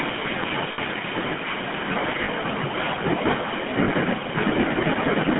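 From the first moment, the speech carries the GSM full-rate codec. The band runs only from 150 Hz to 3.4 kHz. The coarse pulse excitation gives a buzzy, gravelly roughness, plainly audible throughout. The texture fits the 13 kbps full-rate coder.

Speech is also cut by the noise suppressor across nearly the whole clip. The suppressor mistakes parts of the speech for background noise. Soft consonants and word endings are pulled down, by about 12 dB at worst. They sound swallowed and faint.

At 0.72 to 0.79 s, lost GSM frames cause a 60 ms gap. That fits three missing 20 ms frames. The decoder repeats the last good frame. The sound holds as a rough, metallic ring.

At 2.24 to 2.29 s, there are more lost GSM frames, this time 40 ms. The same repeated-frame concealment rings briefly. The room noise has risen by about 20 dB near 1.5 s and stays about 28 dB below the speech.

At 3.84 to 3.89 s, a third 40 ms loss of GSM frames occurs. 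Again the last good frame is replayed. A short metallic, buzzing smear sits in place of the missing sound.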